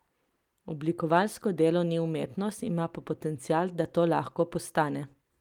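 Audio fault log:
Nothing in this speech recording registers as a fault. There is no moment in it that calls for an entry here.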